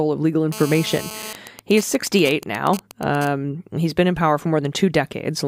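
From 0.52 to 1.33 s a GSM phone buzz sits under the speech. A nearby 2G phone in a call pulses its radio 217 times a second. The audio circuit rectifies those pulses. The result is a hard, raspy 217 Hz buzz, about 13 dB below the speech.

From 1.35 to 3.27 s the buzz turns into GSM signalling bursts. The phone is still in a call, but its user has gone silent, so it transmits only short groups of bursts. These come through as even ticks with a longer 217 Hz buzz twice a second, roughly 10 dB down.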